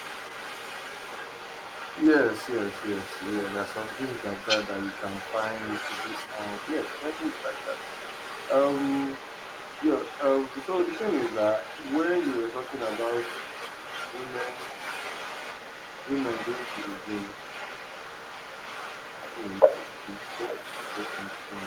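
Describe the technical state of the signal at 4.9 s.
At 4.9 s you can hear the other side's voice leaking through, sitting around 10 dB under the talker for the whole clip, likely loudspeaker echo the canceller didn't fully remove.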